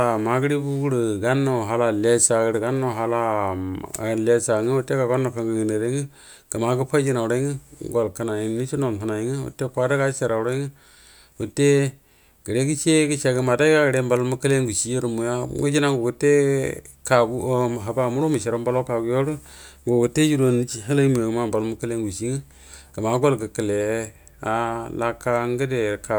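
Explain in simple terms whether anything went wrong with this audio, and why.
Listening to the whole recording, nothing stood out as having gone wrong with the sound.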